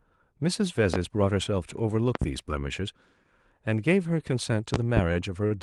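A speech recording, carried over a call link whose coding band-limits the audio at about 12 kHz, has five loud pops, most likely from plug, switch or static discharges. There is a single pop at 0.94 s, a double pop between 2.15 and 2.25 s, and another double pop between 4.74 and 5.01 s. Each sits about 15 dB above the speech, the last about 20 dB, with the speech continuing underneath. On a waveform they are tall, narrow spikes. On a spectrogram they are thin vertical stripes spanning the whole band.

Near the end there are two short stalls from late packets, at 5.13 to 5.18 s and 5.47 to 5.54 s. Each time the jitter buffer ran dry, and the last sound was held for about 23 ms and then 38 ms before playback resumed with nothing lost. They are heard as briefly smeared sustains with a slight buzz or dip. A spectrogram shows frozen, horizontally stretched harmonics, and the waveform shows a short repetitive stretch.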